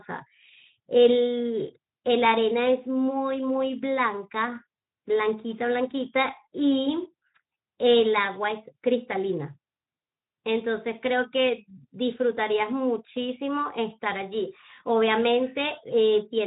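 No technical faults can be heard in the speech, and the Speex coding it passed through leaves only light codec colouring, which fits a mid-range quality setting of around 15 kbps.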